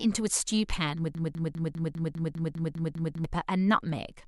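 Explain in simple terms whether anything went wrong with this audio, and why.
The playback likely stalled and replayed its last scrap of speech: a broken-record loop from 1.15 to 3.24 s, one 0.2-second piece repeating ten times.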